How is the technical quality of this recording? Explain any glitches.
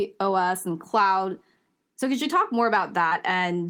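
There's one glitch. Right after "could you talk more", around 3.09 to 3.13 s, short concealed packet loss: about 20 ms never arrived, so the decoder stretched the preceding sound over the gap, leaving a quick smeary wobble.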